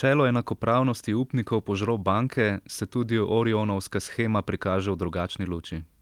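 Nothing in this speech recording stands out as a technical fault, so there's nothing to flag here.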